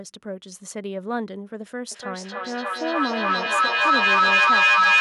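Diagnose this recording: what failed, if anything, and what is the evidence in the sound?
Feedback echo between two devices, a call-processing fault: from 1.92 s to the end, speech recurs roughly every 300 ms, thinner and more ringing each pass, building to about 11 dB above the speech. A nearby second device replays this microphone, beyond the echo canceller's reach. A single echo-canceller leak would fade instead.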